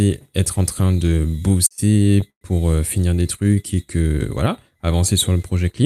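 A speech clip. From 0.79 to 2.43 s, just after "être en", the audio stutters and drags through fourteen short stalls, the longest about 116 ms. The stalls hold or fade out the last sound for about 278 ms in total, with nothing lost. These are repeated stalls (stutter): packets arrived late, and the jitter buffer kept running empty. Between 3.44 and 4.16 s, after "pour euh finir des" and before "voilà avancer", the speech slows to about 87% speed at unchanged pitch, drawn out by roughly 105 ms. This is a jitter buffer slow-down, in which the receiver repeated pitch periods to rebuild its reserve.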